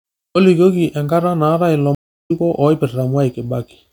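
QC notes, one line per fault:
1.95–2.31 s, stream reconnect: 0.35 s of silence as the connection drops, then a fresh decoder picks up roughly 0.4 s further on, skipping speech where a simple dropout would only mute it.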